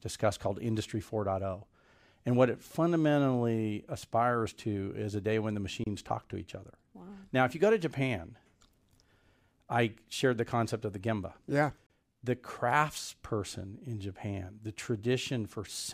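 At 5.84 s and 11.87 s, the speech drops out for about 27 ms and 34 ms. These are gaps at joins of encoded pieces, roughly every 6 s. Separately encoded segments kept their leading silence and end padding.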